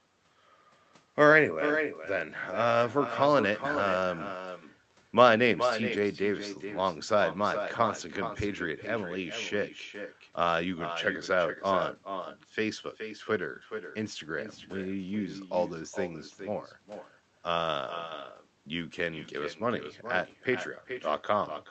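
From start to finish the speech carries an echo with no canceller: the far end's loudspeaker feeds its microphone, and nothing strips that out, so every phrase returns roughly 0.4 s later, about 9 dB down and thinner, riding over audio already dulled above about 8 kHz by the call codec.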